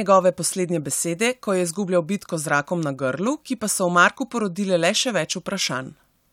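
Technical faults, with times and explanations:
No technical faults can be heard in this speech clip.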